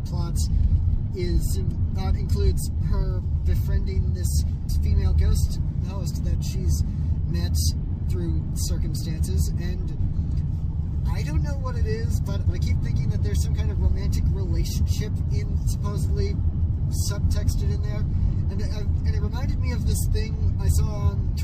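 No audible technical faults present.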